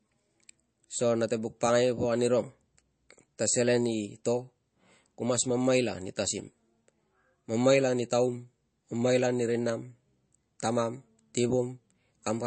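The speech sounds dull and watery throughout, with nothing above about 8.3 kHz, a swirly, chirping edge on s sounds and softened consonant attacks. This is likely MP3 compression at a low bitrate, around 35 kbps, cutting the treble and dropping weak frequency lines frame to frame.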